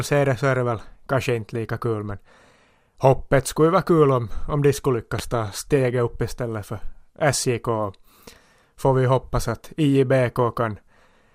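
At 5.19 to 5.22 s, just after "om om de skulle" and before "ta steget", a single loud pop cuts through the speech. It is a short, sharp burst, roughly 10 dB above the speech level. The likely cause is a sudden voltage step or pulse entering the signal chain, such as a plug, a switch or a static discharge. The speech carries on underneath it without a break.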